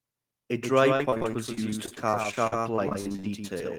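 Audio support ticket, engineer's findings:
Speech shadowed by a second, slightly quieter copy trailing about 150 ms behind across the whole clip; hard slapback with no room tail. Doubled audio track, likely a second capture path or a misaligned edit. Copy sits roughly 5 dB below the original and is full-band.

Choppy, robotic speech from 0.96 s to 3.60 s with small pieces missing. Repeated packet loss: dozens of short dropouts, longest 45 ms, each papered over by stretching the preceding sound. Around a fifth of that stretch is concealed rather than real signal.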